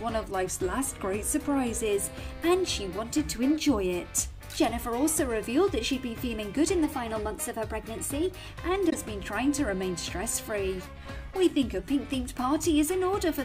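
From 0.31 to 1.82 s and again from 10.87 to 11.79 s, the sound slows by about 6% and drops roughly a semitone. Between 6.85 and 8.49 s it speeds up by about 6% and rises roughly a semitone. These steps are likely drift correction steps, where clock-matching software jumps the playback rate to refill or drain its buffer. From 8.90 to 8.93 s, a short glitch comes from damaged data in the compressed stream, where the decoder misreads the corrupt frames and loses sync.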